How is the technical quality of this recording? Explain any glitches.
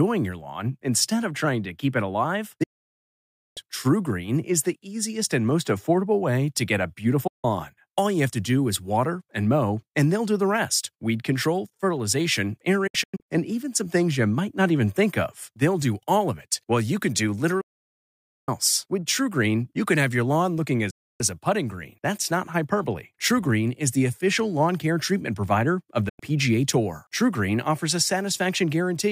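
The recording suffers from repeated digital broadcast dropouts. Six times the speech cuts to silence and returns later, and whatever was said in each gap is gone.

Digital broadcast dropout, 2.63 to 3.58 s: the receiver stopped getting usable frames and muted for nearly a second. The sound fades out within about 8 ms, so it lands as an abrupt hole.

Digital broadcast dropout, 7.27 to 7.45 s, right after "way to get a": a brief 160 ms mute from failed frames clips the flow mid-phrase.

Digital broadcast dropout, 12.87 to 13.27 s, between "rest weed control fertilization" and "and even some things": here the frame failures are scattered. Several short holes, none longer than about 96 ms, make the sound stutter.

Digital broadcast dropout, 17.61 to 18.49 s: a second long mute, close to 0.9 s, as the signal is lost again.

Digital broadcast dropout, 20.90 to 21.21 s: a roughly 0.3 s gap of silence.

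Digital broadcast dropout, 26.09 to 26.20 s, after "care treatment provider of": a short cut of about 0.1 s. The lost stretches throughout fit frames of roughly 32 ms each.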